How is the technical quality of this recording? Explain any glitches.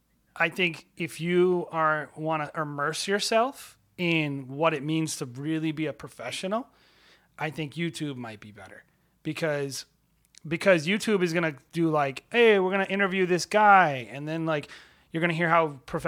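Nothing stood out on listening to this speech recording, and there were no glitches to explain.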